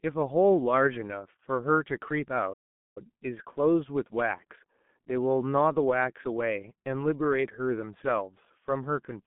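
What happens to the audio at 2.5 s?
At 2.53 s the sound cuts out completely and stays silent until 2.98 s, a gap of about 0.43 s. This is a playback stall, most likely the player running short of data or its output thread being held up, so nothing reached the output until it recovered. Unlike a codec dropout or packet-loss concealment, the gap is dead silence with no smeared or buzzy fill, and the sound picks up once output resumes.

Around that gap the audio carries the sound of the G.723.1 codec at 6.3 kbit/s. The signal sits in a telephone band of roughly 150 Hz to 3.5 kHz, with nothing above 3.5 kHz. The heavy coding damage makes the speech muffled and hoarse and smears consonants together. That rough, grainy texture distinguishes it from simple band-limiting, which would only dull the top end without the hoarseness.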